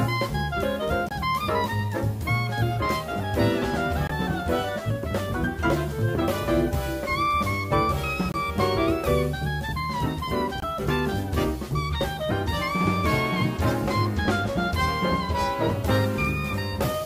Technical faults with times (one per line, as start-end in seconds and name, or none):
1.09-1.12 Bluetooth dropout
4.07-4.11 Bluetooth dropout
8.32-8.36 Bluetooth dropout
10.60-10.64 Bluetooth dropout